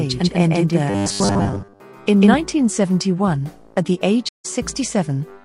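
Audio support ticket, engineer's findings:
Doubled audio track from the start to 2.34 s: a second full-band copy at about the same level, trailing by around 150 ms, dry with no room tail, cutting out abruptly at 2.34 s. Likely a second capture path or an edit stacking two copies.

Robotic sound from repeated short buffers, 0.90 to 1.80 s: a rigid metallic buzz at 100 Hz, which fits a 10 ms chunk being looped. Most of the real audio is skipped while the last buffer repeats. The likely cause is starved input delivery.

Stream reconnect at 4.29 s: a 156 ms dropout, then playback picks up roughly a tenth of a second further along. The connection dropped and a fresh decoder restarted mid-stream, so the resumed audio comes in from a later point.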